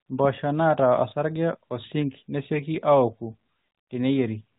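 Nothing here counts as a technical fault; the speech just comes through the narrowband mobile link the way that channel normally carries it.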